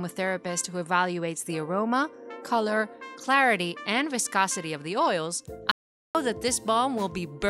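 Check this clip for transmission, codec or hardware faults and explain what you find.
One fault stands out: an audio dropout to silence from 5.71 to 6.15 s, lasting about 435 ms. The sound cuts off mid-flow and returns just as abruptly, and the gap holds silence, with no background hiss or room tone at all. The likely cause is the input briefly going missing, through a lost link or disconnected device, while recording continued writing silence. That silent floor separates it from a natural pause or a gate closing, which would leave faint ambience or a gradual fade.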